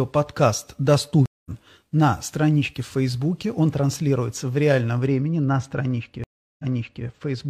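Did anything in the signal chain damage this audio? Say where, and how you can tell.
Yes, at two stages. The network path to the player dropped twice, which is a stream reconnect. At 1.26 s the audio goes silent for about 0.2 s, and when it comes back on "на страничке в" it has skipped ahead by roughly a fifth of a second. At 6.24 s there is a 0.35 s gap, and then the sound rewinds by 0.46 s and repeats, as a server does when it resends a burst. On a waveform each gap is a flat line followed by a soft fade-in from the restarted decoder. On a spectrogram each shows up as a blank vertical band.

The second fault is de-emphasis applied wrongly, at the decoding or playback filter stage. From 5.07 s, just after "транслируется в реальном", to the end at about 7.5 s, the speech turns dull and muffled. A treble cut meant for pre-emphasised audio was applied to a signal that had none, or was applied twice, so the top end sags. 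The high end is about 14 dB down at 10 kHz relative to 1 kHz. On a spectrogram the upper bands fade smoothly toward the top from that point on, with no sharp cutoff edge.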